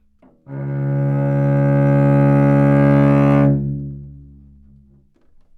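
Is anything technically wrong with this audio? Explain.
No, nothing technically wrong.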